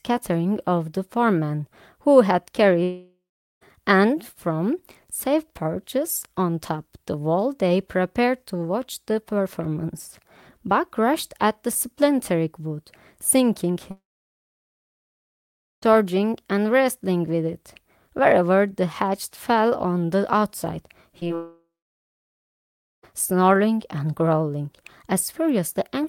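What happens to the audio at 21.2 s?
Short concealed packet loss hits twice, at 21.20–21.23 s and 21.27–21.31 s. Each time, a packet arrives too late and the decoder extrapolates the preceding audio, leaving a brief smear or wobble.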